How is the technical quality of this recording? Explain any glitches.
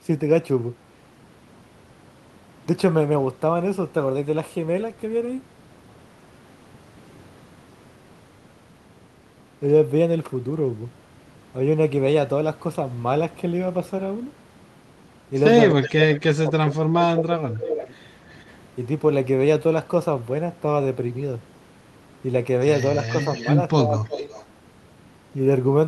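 The recording has two echo-related problems clustered in the second half, both pointing to a loudspeaker call with imperfect echo control.

Speech suppressed in double talk at 15.71 to 17.93 s and 23.85 to 24.33 s: the voice sinks by roughly 20 to 25 dB, likely because the echo canceller, hearing both sides at once, turned everything down. Unlike a network dropout, it dips rather than going silent.

Echo leak at 15.86, 17.77 to 17.85, 18.3 to 18.55, 23.06 to 23.55 and 23.98 to 24.45 s: a faint-to-noticeable copy of the voice returns about 330 to 350 ms late, likely residual loudspeaker pickup. That distinct, delayed repeat sets it apart from room reverberation.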